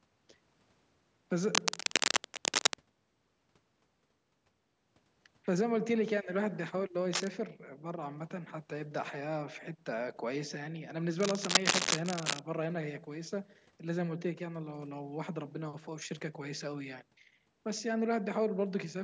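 From 1.5 to 2.79 s, 7.13 to 7.31 s and 11.2 to 12.4 s, dense, uneven scratching rides over the speech, mostly louder than it. This is cable scratch noise, likely from a worn connector being moved, and its rustling texture sets it apart from isolated clicks or dropouts.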